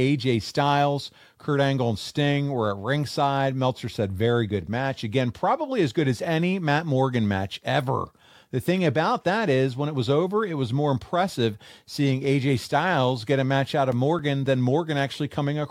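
From 13.11 to 15.00 s, CD scratch ticks: eight brief clicks, roughly four per second, the longest roughly 5 ms, where disc damage exceeded error correction once per revolution.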